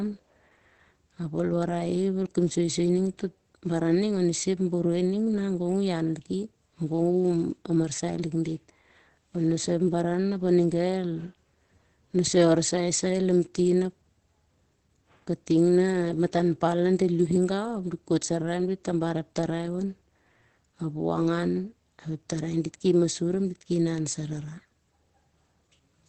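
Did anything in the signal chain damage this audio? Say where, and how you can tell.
Yes, at the codec stage. Heavy Opus compression runs through the whole recording, likely from a very low rate that fits about 12 kbps in the speech (SILK) mode. The top end is cut back to a wideband limit, leaving the speech muffled and hoarse throughout.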